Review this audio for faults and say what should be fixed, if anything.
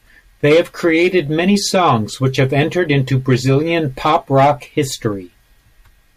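No technical faults can be heard anywhere in the recording. Nothing in it calls for repair.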